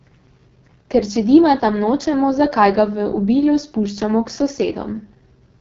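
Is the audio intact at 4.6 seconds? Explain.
No. The AMR wideband (HD Voice) codec affects 4.6 seconds just as it affects the whole clip. This codec models the voice as a pulse-excited vocal tract up to 6.4 kHz and fills the band above with shaped noise, with nothing above 7.6 kHz. Here the speech sounds heavily rough and raspy, which points to the lowest 6.6 kbit/s mode, where too few bits remain to reproduce the excitation cleanly.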